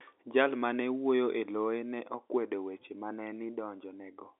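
Nothing faulty can be heard anywhere in this audio.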